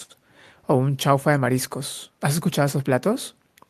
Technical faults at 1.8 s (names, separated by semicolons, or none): none